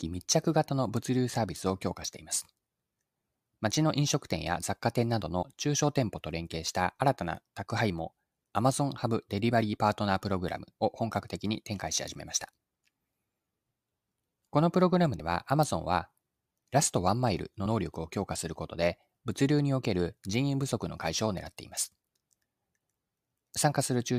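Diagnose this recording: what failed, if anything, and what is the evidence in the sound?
The fault lies at the codec or storage stage: compressed frames were skipped. The speech jumps ahead at 5.41–5.43 s, 15.19 s and 17.65 s, each time losing about two frames of roughly 23.2 ms, so around 50 ms goes missing. The decoder never played those frames, either because they were absent or because it rejected them as damaged. A spectrogram shows the harmonics stepping abruptly. The waveform shows an abrupt discontinuity.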